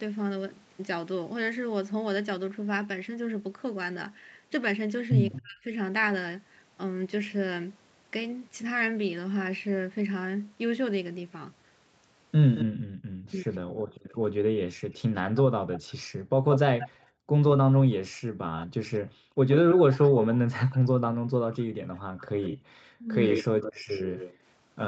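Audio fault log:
5.32 to 5.42 s, 12.55 to 13.57 s, and 15.35 s to the end: echo leak. A delayed copy of the speech trails the original, about 15 dB down at first and about 10 dB down in the last stretch. The delays are 221, 179 and 118 ms. The likely cause is a loudspeaker echo the canceller failed to remove.
5.43 to 5.73 s, 13.22 to 13.54 s, and 22.99 to 23.15 s: speech suppressed in double talk. The talker's speech dips sharply, by up to around 30, 25 and 20 dB, for a few hundred milliseconds at most. This likely happens because the canceller confuses overlapping talk with echo and turns everything down.
12.65 to 19.39 s and 21.1 to 23.86 s: background gated by the echo canceller. The room sound drops out in dips, about 40 dB deep at worst. These total around 2 s in the first span and half a second in the second. The canceller clamps the microphone while the loudspeaker plays, then releases it.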